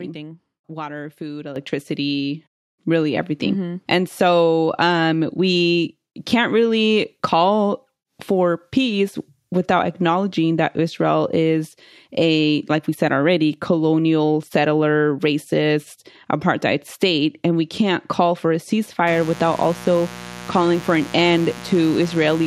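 At 1.56 s the level of the speech and the background noise jumps up together by about 8 dB in a single step. This is a microphone volume step-up: the call software judged the input too quiet and raised the device's input volume all at once instead of ramping it. Because the gain change happens before the signal is processed, the noise floor rises by the same amount as the speech, and the transition is abrupt.

From 19.07 s to the end of the clip, a steady, raspy mains buzz runs under the speech at roughly 15 dB below the signal. Its fundamental is 60 Hz. Sharp switching spikes from something such as a dimmer, a rectifier or an unshielded cable get into the audio path twice per mains cycle. That gives the buzz a 120 Hz pulse and a dense set of harmonics reaching into several kHz, which makes it harsh rather than a smooth hum.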